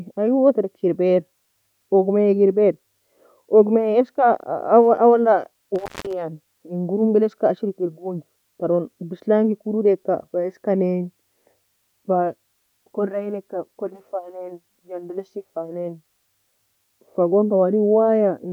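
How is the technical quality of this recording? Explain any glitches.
One glitch affects the speech. From 5.75 to 6.13 s there is an intermittent contact: a loose connection opens for about 208 ms, cutting the signal to faint hiss with crackle at each edge.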